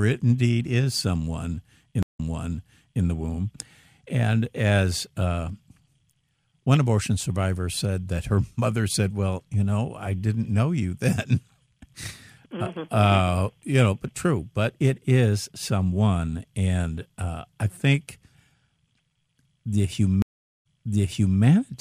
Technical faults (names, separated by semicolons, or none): stream reconnect